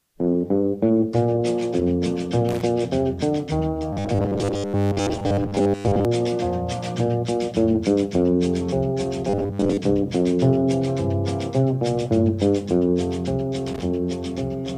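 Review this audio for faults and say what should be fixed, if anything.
A brief irregular burst of crackle and scratching appears from 2.49 to 2.62 s and again from 13.67 to 13.82 s. This is loose connector crackle: a worn or dirty contact rapidly makes and breaks as it shifts, chopping the signal into fragments, with any DC on the line adding pops. Reseating or cleaning the connectors, and replacing a worn cable or jack, would stop these bursts.

From 3.93 to 6.05 s, and again from 9.29 to 9.77 s, the sound turns rigid and metallic, carrying a fixed buzz at 100 Hz. This is robotic sound from repeated short buffers, likely caused by new audio arriving too seldom so that the software loops the last 10 ms and skips most of the real material. That period sets the buzz pitch. Enlarging the buffer or easing CPU and network load so audio arrives on time would prevent it.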